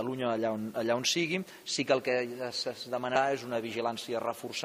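At 3.15 s, compressed frames are skipped. Roughly three frames of 21.3 ms each never reach the output, so the audio jumps ahead by around 70 ms. On a waveform, the envelope shifts abruptly with no gap. On a spectrogram, there is a vertical smudge where the harmonic patterns before and after fail to line up.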